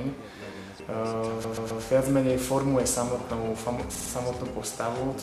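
A run of compressed frames was repeated in the stream, so the decoder plays the same audio again: from 1.44 to 1.83 s a 130.6 ms block, which fits five frames, repeats three extra times, and from 3.95 to 4.10 s a 52.2 ms block does the same. Both are heard as repeated-frame stutters that lengthen the audio.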